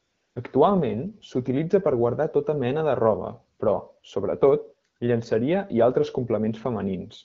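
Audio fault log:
0.00 to 0.35 s, AMR comfort noise: the phone treated the opening as silence and sent no speech frames for about a third of a second, so the receiver filled it with smooth synthetic hiss built from a rough level-and-spectrum sketch, replacing the real background, under wideband coding that sounds like about 12.65 kbit/s.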